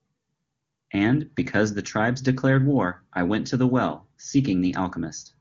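No technical faults are audible.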